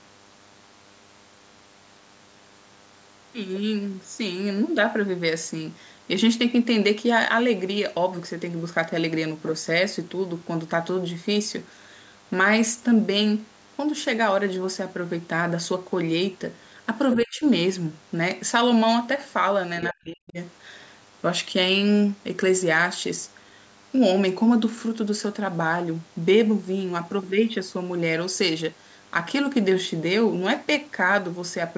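A DECT cordless phone buzz runs through the whole clip. It is a thin, steady 100 Hz buzz with many harmonics, about 35 dB below the speech. A nearby handset or base station sends radio bursts every 10 ms, and the audio circuit rectifies them.

At 17.11 to 17.15 s, and again at 19.83 to 19.88 s, a brief scrap of a second voice comes through, about 10 dB below the talker. This is likely the other side's voice leaking through from a loudspeaker, left behind by the echo canceller.

Right after each leak, the speech is suppressed in double talk. From 17.16 to 17.44 s it dips by up to about 30 dB. From 19.90 to 20.38 s it sinks by up to about 40 dB. The echo canceller likely could not separate the talker from the echo, so it turned both down. Nothing above 8 kHz comes through.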